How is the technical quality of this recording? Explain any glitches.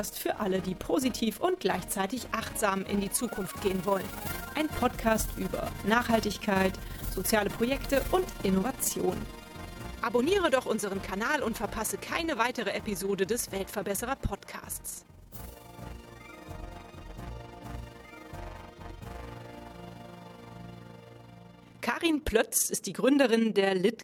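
Technical quality is compromised by one fault that runs through the entire recording: overlap-add ripple. The audio was split into windowed frames and reassembled with an overlap whose window gains do not add up to a constant. The combined level therefore swells and dips once per frame, here by about 6 dB at around 20 times a second. The sound takes on a rough, fast flutter, a robotic tremolo pulsing steadily beneath everything from start to finish.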